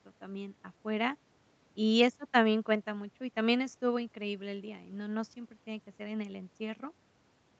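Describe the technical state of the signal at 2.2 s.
At 2.2 s the speech is intact, carried cleanly through the call's microphone processing and Opus call path, with nothing above about 8 kHz as that band limit allows.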